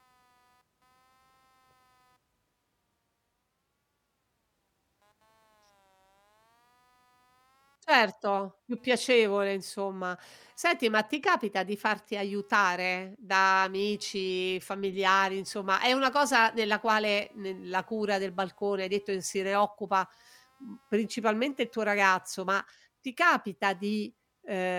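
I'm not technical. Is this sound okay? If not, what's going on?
No. Computer activity noise runs throughout the speech: a faint buzz, around two hundred pulses a second, that shifts with the computer's workload rather than with the talking.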